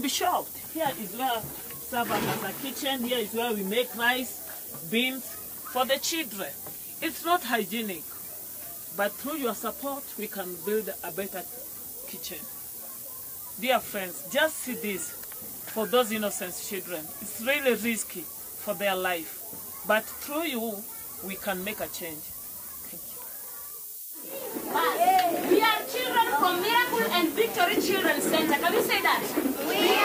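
A steady, thin hiss runs through the whole clip, rising sharply toward the top of the band: low bit depth with noise shaping. The sound is quantised to 5 bits, and the rounding error is pushed upward in frequency, leaving noise nearly as loud as the signal.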